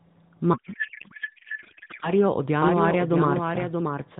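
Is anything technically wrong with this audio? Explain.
Yes, there are two faults, heard through a narrowband AMR mobile channel with nothing above 4 kHz.

From 0.54 to 2.11 s there is a codec payload misread. The decoder appears to parse octet-aligned AMR frames as bandwidth-efficient ones, so the bit fields land in the wrong places. The speech is replaced by garbled noise and warble that barely tracks it.

From 2.62 s to the end there is a doubled audio track. A second full-band copy runs roughly 0.7 s behind the original at about 5 dB lower. It starts abruptly, with no decay or room colour, which likely points to a second, slower capture path feeding the same mix.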